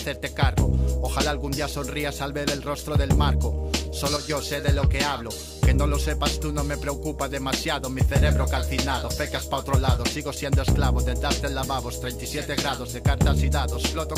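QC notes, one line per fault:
4.16–4.30 s, one channel drops out: level dips abruptly by about 6 dB, likely one stereo channel lost; waveform shows a sharp-edged, halved-amplitude notch.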